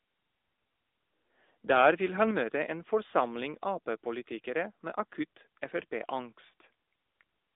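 The whole clip has gone through the AMR narrowband mobile codec. Nothing survives above about 3.7 kHz, and the speech has a plainly synthetic buzz, which fits a mid-rate mode around 10.2 kbps. At 2.31 s, just before "møte en", the level drops by about 4 dB in one step, most likely a microphone volume stepped down by the call software.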